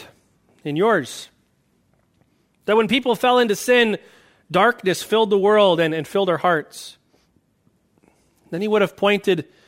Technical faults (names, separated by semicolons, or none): block size mismatch (truncated)